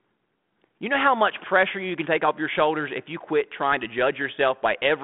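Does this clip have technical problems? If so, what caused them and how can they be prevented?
No, this clip has no technical problems, so there is nothing here that needs preventing.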